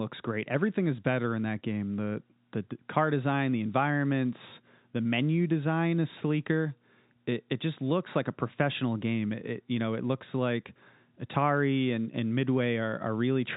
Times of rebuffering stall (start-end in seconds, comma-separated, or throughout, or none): none